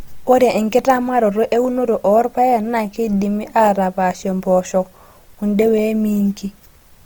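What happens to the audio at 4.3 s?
At 4.3 s the speech carries Opus compression damage present throughout: a grainy, rough texture with noisy upper bands and few spectral holes, and content reaching about 20.2 kHz. It likely comes from a CELT-mode encode near 24 kbps, with starved bands folded or noise-filled.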